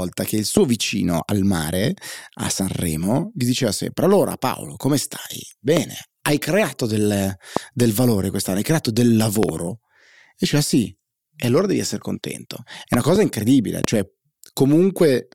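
Loud pops at 0.57 s (after "che il"), 5.77 s, 7.57 s (after "hai creato del"), 9.43 to 9.51 s (a double pop), 12.94 to 13.18 s (also double), and 13.84 s. Each is a sharp pulse jumping well above the speech, which carries on underneath. The likely cause is a sudden voltage spike from a plug, switch, static discharge or driver glitch.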